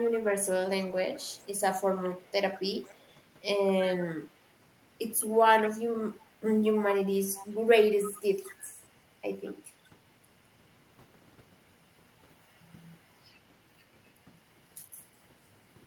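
A delayed copy of the speech trails it by 208 ms in six stretches: 0.03–3.08 s, 3.69–4.4 s, 6.05–6.31 s, 7.29–7.57 s, 7.91–8.89 s and 9.45–9.53 s. It sits roughly 20 to 30 dB below the direct speech, loudest near 4 s and 8 s. This is echo leak, likely a far-end loudspeaker feeding its microphone past an incomplete echo canceller. Unlike room reverberation, it is one distinct, fixed-delay repeat that comes and goes in patches rather than a smooth decaying tail.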